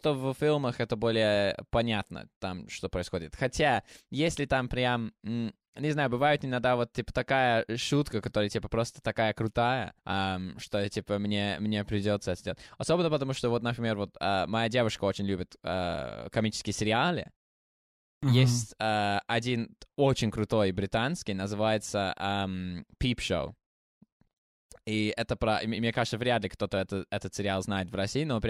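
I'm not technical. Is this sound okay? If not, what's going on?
No. There is a clipped start after a pause at 17.84 s. After a short silence of about half a second, the playback device was slow to wake up again. The first 0.39 s of speech is lost, so the talking starts abruptly.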